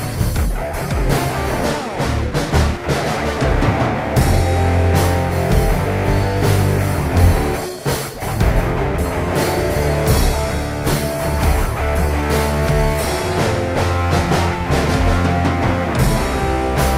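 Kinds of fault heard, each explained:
jitter buffer speed-up: an overfilled receive buffer was drained by cutting short pitch-period slices, so three brief stretches run 5 to 8 percent fast with unchanged pitch.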